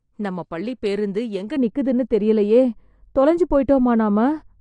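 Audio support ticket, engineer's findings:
Dull, fizzy speech with warble on sibilants throughout; nothing above 9.8 kHz. Likely AAC compression, band-limited and coarsely quantised, fitting roughly 32 kbps. Hard edge and smearing, unlike a smooth tilt.

From 1.56 s to end, after "நம்ம பள்ளிப் பேருந்து எங்க": extra muffling, de-emphasis applied wrongly. Gradual treble slope, about 11 dB down at 10 kHz relative to 1 kHz, no sharp cut-off.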